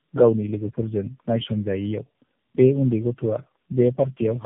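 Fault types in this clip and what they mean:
Tandem speech coding: The speech has passed through several low-rate speech codecs one after another, each decoding and re-encoding the already degraded output of the one before, so the losses stack. The sound is rough, muffled and warbly beyond what a single coder would leave, with nothing above 3.5 kHz. The character fits three speech codecs in a row, such as AMR-NB at 7.4 kbit/s and G.729A joined through G.711 A-law links.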